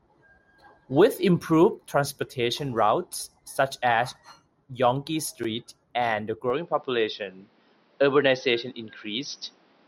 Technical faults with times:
6.50-9.88 input switched to a poorer device

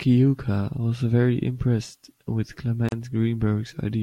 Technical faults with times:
2.89-2.92 gap at a join of encoded pieces

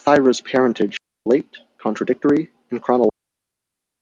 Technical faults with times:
0.97-1.26 digital wireless dropout
3.09-4.02 digital wireless dropout

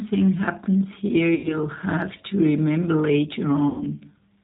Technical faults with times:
0.00-4.44 G.729 codec
1.35-1.59 VoIP packet loss concealed by the speech codec
3.69-3.87 VoIP packet loss concealed by the speech codec

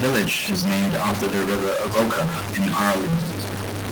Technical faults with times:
0.00-3.91 stuck bit

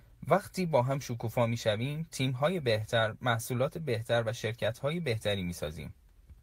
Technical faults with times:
none

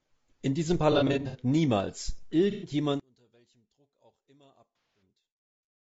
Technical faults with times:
0.00-5.81 low-delay AAC compression
0.92-1.40 AAC frame loss with concealment
2.51-2.71 AAC frame loss with concealment
3.00-5.81 one channel inverted
4.78-5.02 AAC frame loss with concealment

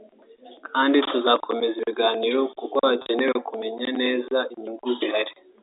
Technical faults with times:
3.02-3.06 packet loss with pitch repetition

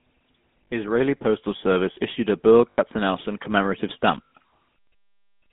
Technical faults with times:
0.00-5.52 GSM full-rate codec
0.64-0.68 lost GSM frames
2.70-2.79 lost GSM frames
4.24-4.28 lost GSM frames

